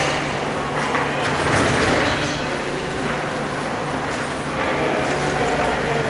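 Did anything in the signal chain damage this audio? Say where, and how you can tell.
No, nothing I can hear in this recording points to any stage of the chain having damaged it, so the sounds come across just as they were captured.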